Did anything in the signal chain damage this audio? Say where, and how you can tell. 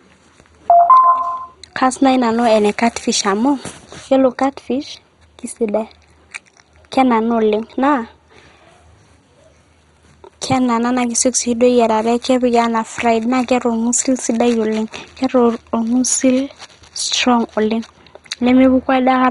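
Yes, at the codec stage throughout: the speech sounds dull, gurgling and granular, with nothing above 11.2 kHz. This is likely MP2 compression starved of bits, fitting roughly 56 kbps. A spectrogram would show a flat ceiling and upper sub-bands flickering on and off.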